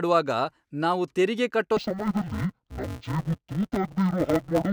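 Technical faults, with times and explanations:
1.77 to 4.72 s, interleaved audio read as planar. The fault begins right after "ನಾವು ತೆರಿಗೆ ಕಟ್ಟೋ" and lasts to the end. Alternating left and right samples are being split into halves per block, each half treated as one channel. The blocks are only 5.33 ms long, which fits a 256-sample block. So the speech turns dull and robotic. A buzz sits at the 188 Hz block rate. No clear octave drop is heard.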